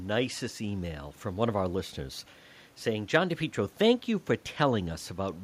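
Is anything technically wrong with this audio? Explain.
No, nothing stood out on listening to this speech, and the faint room noise sits about 34 dB below the voice as part of the recording itself.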